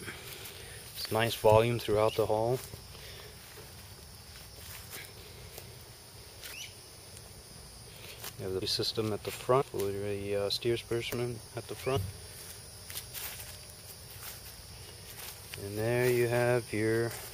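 Compressed frames skipped: whole 26.1 ms frames went missing or were rejected by the decoder, so the audio jumps ahead by a fraction of a second, leaving audible jumps at 5.16, 6.52, 8.61, 9.60 and 11.95 s.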